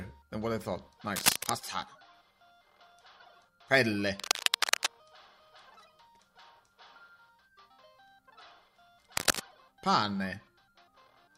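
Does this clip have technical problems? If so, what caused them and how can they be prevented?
Yes. Cable scratch noise breaks in three times: 1.13 to 1.50 s, 4.19 to 4.91 s and 9.17 to 9.40 s. It is a scratchy rustle, a little louder than the sound in the first and last bursts and about level with it in the middle one. The likely cause is a worn cable or connector being moved, so its contact resistance jumps about rapidly. On a spectrogram each burst is a dense, ragged smear across the band, and on the waveform it is a cluster of irregular spikes. Replacing worn leads and strain-relieving connectors would prevent it.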